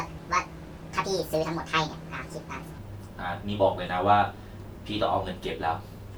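From the start to 2.78 s, the speech plays as a section at the wrong speed: 1.62 times too fast, hurried and roughly seven semitones high. Pitch and tempo jump together, unlike a pure pitch shift, likely from playback on the wrong clock.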